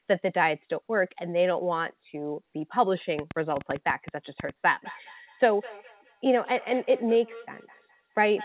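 Speech, sent over what sounds like a narrowband call: nothing above 4 kHz, which fits a G.711-style telephone codec. From 3.19 to 4.50 s there's a train of clicks, about 6.9 a second but unevenly spaced, roughly ten of them, with the loudest sticking out around 10 dB above the speech. They sound alike and tick right through the gaps too, so it's something injecting pulses from outside, likely nearby equipment or a faulty connection or power supply rather than anything in the talker's audio. Then from 4.71 s to the end there's feedback echo between two devices. Everything comes back about 200 ms later, up to about 18 dB below the speech, thinner and ringier on each pass. That's two devices in the same room on one call: one plays out the other's feed, its mic picks it up and sends it round again, and neither echo canceller catches it because each only removes its own playback.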